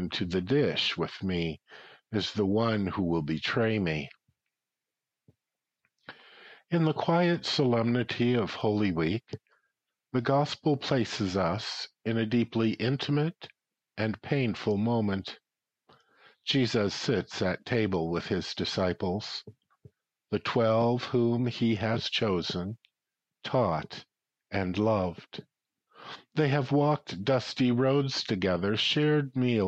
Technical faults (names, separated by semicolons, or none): dropped samples